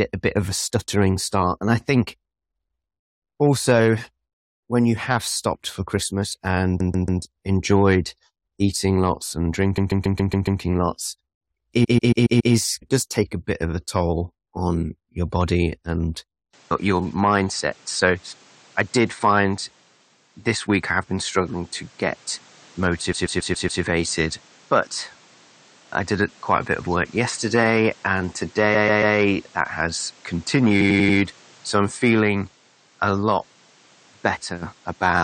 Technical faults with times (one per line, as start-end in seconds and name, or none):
6.79-7.21 repeated frames
9.76-10.60 repeated frames
11.83-12.53 repeated frames
16.53-35.24 input switched to a poorer device
23.12-23.81 repeated frames
28.74-29.15 repeated frames
30.80-31.17 repeated frames